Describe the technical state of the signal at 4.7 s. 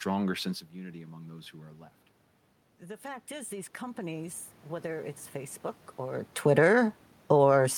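Automatic gain rising is under way at 4.7 s, part of a climb from 2.79 to 6.33 s. After the input dropped by about 11 dB, the gain control lifted its gain about 10 dB gradually, so the speech and the room noise swell up together.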